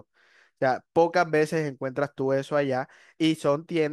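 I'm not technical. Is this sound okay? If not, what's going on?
Yes, it's fine: nothing here cuts out, skips or sounds broken, so there's nothing you need to worry about.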